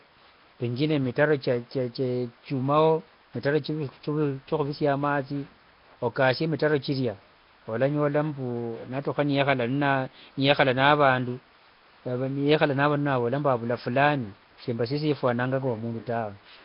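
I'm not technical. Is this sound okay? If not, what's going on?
No. Nellymoser compression runs through the whole clip, from start to finish. The speech has a rough, hissy fuzz around it and a smeared, underwater feel, and nothing is heard above about 5.3 kHz, which dulls the crisp edges of sounds. This is likely the old Flash microphone codec, which chops audio into short blocks and spends very few bits on each. Weak frequency bands get no real detail and are filled in with noise, causing the hiss.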